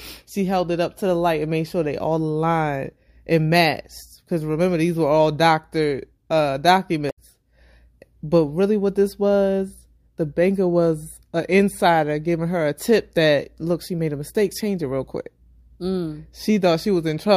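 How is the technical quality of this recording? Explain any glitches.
The speech has one glitch. At 7.07 to 7.18 s, right after "were all doctor uh", there is damaged data in the compressed stream. Some bytes there are corrupted. The decoder misreads those frames, loses sync and hunts for the next frame header. For about 0.12 s you hear a brief chirp, squawk, click or short hole.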